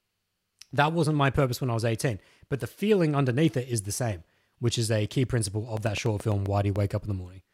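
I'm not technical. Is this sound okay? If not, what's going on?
No. From 5.77 to 6.77 s there's a train of clicks: about seven uneven ticks per second, likely from electrical interference or a faulty connection or power supply.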